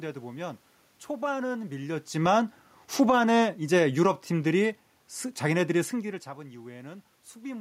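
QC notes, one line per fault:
2.93–4.79 s: automatic gain falling. The gain control judged the input too loud, or its background noise too strong, and pulled its gain down by about 4 dB over nearly two seconds. Speech and room noise sink together, unlike the level shifts from the talker moving around 2 and 6 s.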